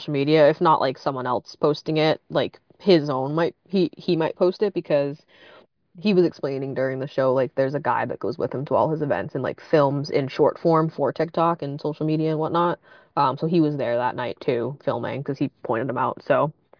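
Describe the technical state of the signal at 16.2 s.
At 16.2 s the speech signal is intact, with no dropout, clipping, distortion or other fault audible at that point.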